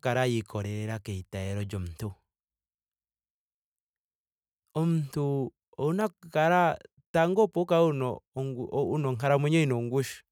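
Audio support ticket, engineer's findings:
No faults found in this speech clip; nothing to report on the ticket.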